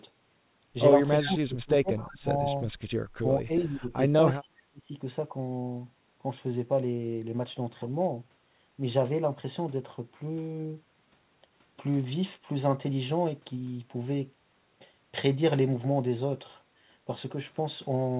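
The speech dips sharply at 1.25 to 2.28 s, 3.20 to 3.27 s, 3.43 to 3.95 s and 4.40 to 4.92 s. The drops range from around 15 to 30 dB. This is likely speech suppressed in double talk. The echo canceller confused the talker with echo while both sides spoke and turned the speech down.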